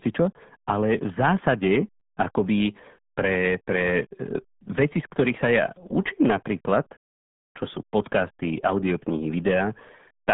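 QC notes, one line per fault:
Throughout: RealAudio 14.4 codec. The speech is muffled and gargly, confined to a phone-like band of about 150 Hz to 3.5 kHz with nothing above 3.8 kHz. The heavy smearing and lost detail point to a very low bitrate, consistent with an 8 kbit/s dial-up speech codec.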